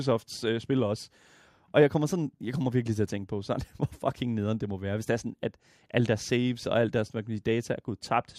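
Nothing here calls for comment, since the recording carries on from beginning to end without any technical fault turning up along the way.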